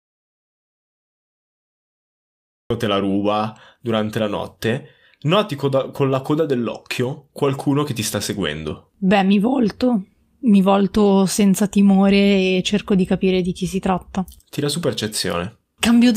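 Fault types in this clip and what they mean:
Audio dropout to silence: the speech starts already cut to silence, no room tone, until 2.70 s; a flat waveform line, blank spectrogram, likely a lost input.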